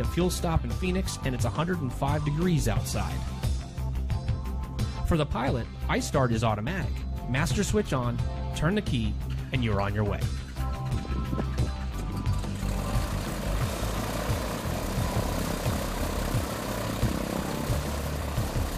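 Nothing in this audio stands out as a technical fault, so there's nothing to flag here.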